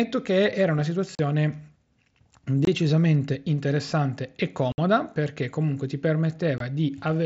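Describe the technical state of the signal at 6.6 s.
Unconcealed Bluetooth headset packet loss, 6.58 to 6.61 s: roughly 22.5 ms of speech vanishes, leaving a short hole with abrupt edges.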